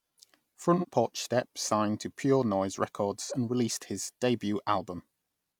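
Speech with AAC frame loss with concealment: one AAC frame seems to have dropped twice, at 0.78 s and 3.25 s (just before "and released his"), and the decoder's 43 ms patch from the last good spectrum sounds briefly smeared and phasey.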